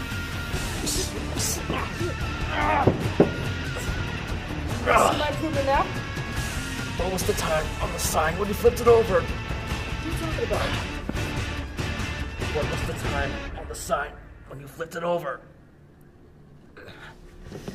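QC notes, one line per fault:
11.09–11.29 s, loud pop: two sharp pops in quick succession, peaking around 10 dB above the surrounding sound, which carries on underneath. A brief voltage step entered the chain, likely from a plug, switch or static discharge, and the following circuitry shaped it into a thump.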